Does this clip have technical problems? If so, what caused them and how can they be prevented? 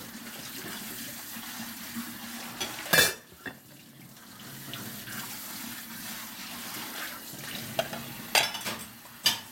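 No, nothing in this recording of sounds stood out as a technical problem on listening, so there is nothing here to trace to a cause or to prevent.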